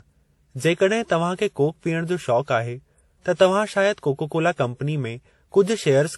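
From start to finish, the speech carries a mix of compression artefacts that don't belong to a single codec. There is swirly, watery smearing on the voice. A metallic sheen sits over it, and its texture keeps shifting. Nothing is present above 19.7 kHz. This layering points to transcoding between lossy codecs, likely an MP3 pass, then HE-AAC, then WMA 1. Each stage re-encoded the previous stage's flaws and added its own. Low bitrates fit what is heard.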